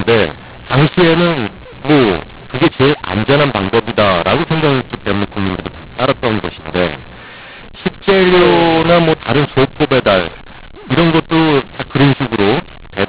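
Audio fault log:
throughout, mu-law and A-law mixed up: the speech was coded as G.711 mu-law but decoded as A-law, so every sample lands on the wrong step of the curve. Some levels come out too loud and others too soft, which gives that harsh, gritty distortion. The near-silent samples get pushed well above zero, so the pauses fill with noise. The 8 kHz telephone format itself, with nothing above 4 kHz, comes through as you'd expect.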